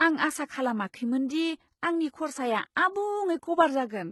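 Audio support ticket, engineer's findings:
Gritty, metallic sibilance throughout. Nothing above 11.8 kHz. Likely HE-AAC compression: treble copied up from lower bands, harmonics mismatched. Heavy damage fits a 16 kbps stream.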